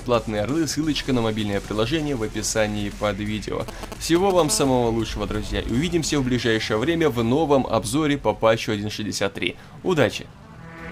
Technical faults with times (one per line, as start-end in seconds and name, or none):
3.68-4.41 GSM signalling bursts
4.49-7.30 GSM phone buzz